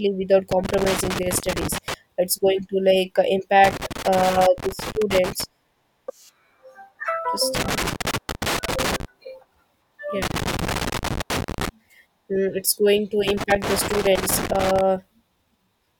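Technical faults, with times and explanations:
0.51–1.94 s, 3.64–5.44 s, 7.55–9.05 s, 10.22–11.69 s and 13.28–14.81 s: loose connector crackle. Each burst lasts about 1.4 to 1.8 s of irregular scratching over the speech. A worn contact keeps making and breaking, chopping the signal into ragged fragments.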